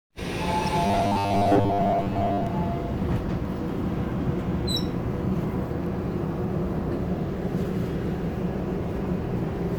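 At 0.67 s a corrupt frame is decoded: damaged bits in a few compressed frames were played anyway, scattering energy to wrong frequencies. It sounds like a brief squeaky blip, and a spectrogram shows a narrow vertical smear of misplaced energy lasting only milliseconds.

From 0.87 to 2.47 s the sound turns into a rigid metallic buzz at 100 Hz, robotic sound from repeated short buffers. The likely cause is audio arriving too slowly while a 10 ms chunk is looped, so most of the real audio is skipped. The waveform shows an identical shape repeating every 10 ms, and the spectrogram shows evenly spaced horizontal harmonic lines at multiples of 100 Hz.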